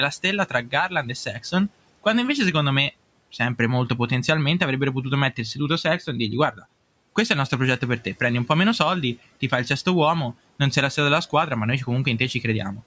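At 0.49 to 0.73 s, and again at 6.52 to 6.64 s between "e dirgli" and "questo è il nostro", speech is cut by the noise suppressor. It mistakes speech for noise and dips it by about 14 dB and about 11 dB respectively, so brief fragments sound swallowed.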